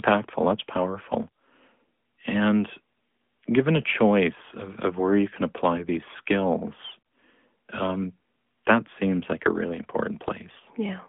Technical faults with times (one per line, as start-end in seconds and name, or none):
0.00-11.08 AMR narrowband mobile codec